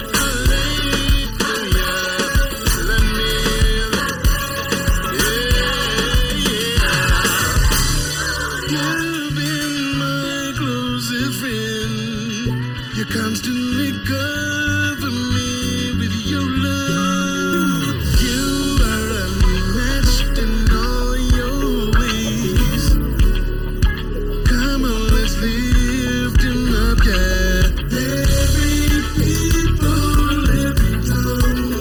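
Channel delay causes comb filtering throughout. One channel lags by under a millisecond, so the mono sum notches near 700 Hz and upward, sounding hollow.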